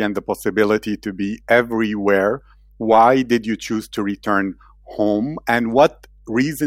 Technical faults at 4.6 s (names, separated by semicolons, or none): mains hum